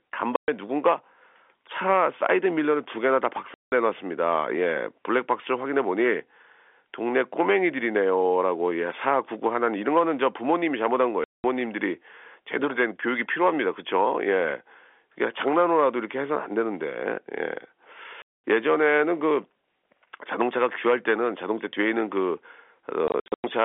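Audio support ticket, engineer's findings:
Packet loss filled with silence, five spots. Hard dropouts with hard edges at 0.36–0.48 s (120 ms), 3.54–3.72 s (180 ms), 11.24–11.44 s (200 ms), 18.22–18.43 s (220 ms), then a scattered burst 23.08–23.44 s (240 ms gone, longest gap 100 ms). Hole sizes all multiples of 20 ms, which fits 20 ms packets. Receiver/jitter buffer inserting silence instead of concealment. Telephone-band G.711 sound (300 Hz–3.4 kHz) heard throughout.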